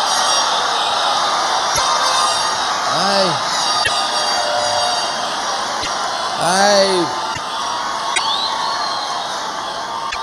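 Dropped MP3 frames likely broke the bit reservoir, so the following frames decoded from the wrong bytes. The audio glitches and skips ahead for about 55 ms, roughly two 26.1 ms frames, at 1.74, 3.83, 5.81, 7.33, 8.14 and 10.10 s.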